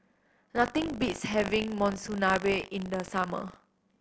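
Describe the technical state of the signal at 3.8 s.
At 3.8 s the speech carries buffer tearing that runs through the whole clip: writer and reader cross every period, splicing in a small slice of audio about 70 ms old. This gives a 50 Hz rattle, seen as regular vertical streaks and waveform discontinuities every 20 ms.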